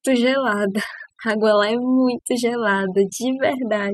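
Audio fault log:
throughout, overdone noise removal: the noise reduction was pushed far too hard on a noisy speech recording, so any frequency band sitting close to the tool's noise estimate gets pulled down sharply or muted, taking the softer parts of the speech along with it. Between phrases the background falls to near silence dotted with twinkling specks. On a spectrogram the gaps show as dark fields scattered with isolated bright dots, and the speech energy looks ragged and patchy.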